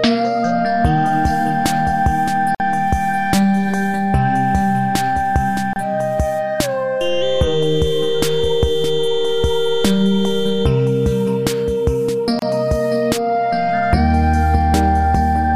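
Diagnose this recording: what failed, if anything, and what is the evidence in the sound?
Three brief holes open in otherwise continuous sound: at 2.55 to 2.60 s (52 ms), 5.73 to 5.76 s (28 ms), and 12.39 to 12.42 s (30 ms). Each drops out with smeared edges, then the audio resumes exactly where it left off. This is a gap at a join of encoded pieces, a codec-stage fault: separately encoded segments were butted together untrimmed, so each encoder's start-up delay and final-frame padding survive as dead air at the seams.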